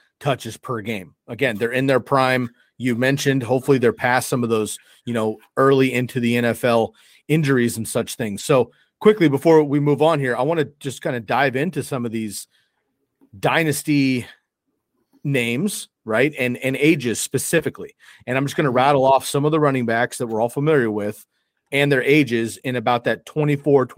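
At 8.39 to 8.41 s, just after "injuries and such things", a lost packet rebuilt from error correction. A rougher, noisier copy fills 20 ms, so no gap.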